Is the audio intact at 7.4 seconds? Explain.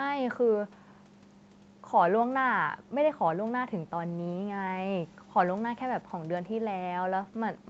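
Yes, the speech is intact at 7.4 seconds, with no dropout, click or other fault at that moment.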